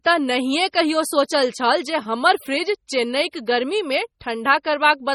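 Right from the start the whole speech track has that watery, swirly quality, with s sounds turning metallic and chirpy and consonant onsets smearing. Nothing comes through above 19.5 kHz. The damage is heavy and it's all the way through, so the likely culprit is MP3 compression at a low bitrate, something like 32 kbps. At that rate the encoder can't cover every frequency line, so weak ones get zeroed and flicker in and out from frame to frame, which gives the swirl.

At about 3.46 s there's a pre-echo: a brief hiss, roughly 15 ms long, sneaks in just before a sharp attack, and the attack itself lands soft and blurred. The codec spreads its quantisation noise across a whole block, and because this onset sits late in its block, the noise sized for the loud part spills into the quiet gap just ahead of it.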